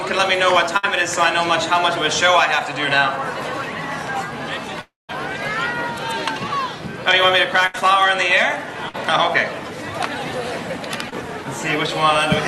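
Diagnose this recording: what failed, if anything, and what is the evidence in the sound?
Burst of packet loss, network stage, at 0.77–0.85, 7.67–7.89 and 8.89–8.96 s: a brief held, fading tail, then a skip ahead, too short to reach silence.

Long network dropout, 4.81 to 5.11 s, likely a network outage: the fading fill gives way to about 180 ms of silence, which a burst never reaches.

Short concealed packet loss at 11.10 to 11.14 s: a 20 ms fill from the last sound blends back in, a brief smear rather than an audible skip.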